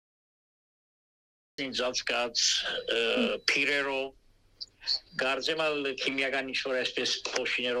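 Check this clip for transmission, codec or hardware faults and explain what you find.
One fault shows up, a cut-off start. Capture began late, so the first 1.58 s are digital silence and the sound enters abruptly mid-event at 1.58 s without any natural attack.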